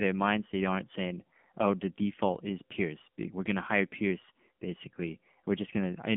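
From start to end, the speech carries AMR narrowband mobile codec damage. The mobile coder models the voice with a pitch predictor and sparse pulses, at a rate of about 7.4 kbps. Its synthetic, buzzy colouring is plainly audible. Nothing outside roughly 150 Hz to 3.5 kHz remains.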